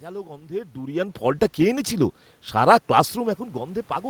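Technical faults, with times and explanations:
1.19 s to the end: automatic gain rising. The gain control judged the input too quiet and kept raising its gain, so the voice and the room noise behind it swell upward together over nearly three seconds rather than the voice alone changing level.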